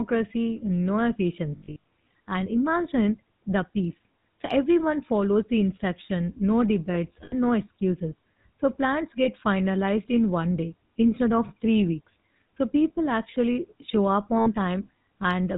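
Throughout the speech, a GSM full-rate codec, consistent with the 13 kbps mode, rebuilds the voice from a vocal-tract model driven by a sparse, regularly spaced pulse train. This discards the fine detail of the excitation and everything above 4 kHz. The result is a plainly audible buzzy, gravelly coarseness over a dull, band-limited voice.

Lost GSM frames interrupt the signal four times. Each time, the decoder fills the gap by repeating the last good frame's parameters. From 1.56 to 1.84 s the losses are scattered, with the longest gap well under a tenth of a second, and they leave a broken metallic warble. Between "the instruction no debates" and "no excuses" (7.24 to 7.33 s), a gap of about 80 ms becomes a brief rough ring. A shorter hiccup at 9.24 to 9.28 s, just before "finalized in one day", fits a single dropped frame. After "people actually show up", 14.38 to 14.48 s brings another metallic smear of about 80 ms.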